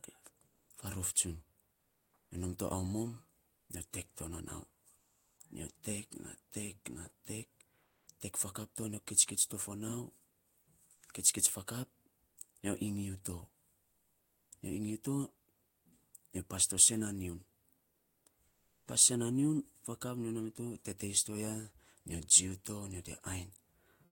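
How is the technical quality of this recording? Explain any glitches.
The speech itself comes through, but the background is repeatedly swapped out. Comfort noise in place of the background occurs at 0.47–5.37 s, 7.83–8.07 s, 10.59–12.37 s, 13.79–15.85 s (ending just before "nyo pas to sen") and 17.87–18.87 s (just after "to sen na nyiun"). In these pauses the real ambience turns into a steady, featureless hiss, about 3 dB quieter at 7.83 s. The likely cause is discontinuous transmission, as in Opus DTX, with the receiver synthesising noise during the gaps.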